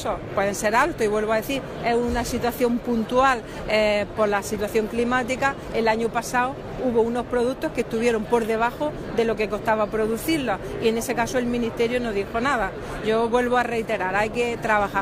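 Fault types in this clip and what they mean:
No technical faults can be heard anywhere in this clip. Nothing in the audio calls for a fault entry.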